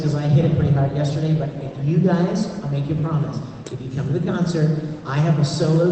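No technical faults are audible.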